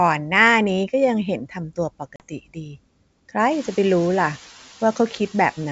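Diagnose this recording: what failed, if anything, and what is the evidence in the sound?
Speech cut by the noise suppressor, at the call-processing stage. Between 1.45 and 1.78 s, and again from 1.99 to 2.77 s, parts of the speech dip by about 15 dB. Roughly 100 ms and 300 ms are affected. The suppressor mistook quiet speech for noise and attenuated it, so those parts sound swallowed.

Packet loss on the ADPCM call, at the network stage. From 2.16 to 2.23 s there is a hard-edged 40 ms silence, which fits about two lost packets. The decoder's adaptive predictor and step size then lose track of the sender's, so the speech comes back slightly distorted before it resettles.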